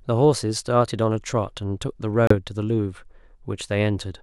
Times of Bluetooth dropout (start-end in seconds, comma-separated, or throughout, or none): 2.27-2.34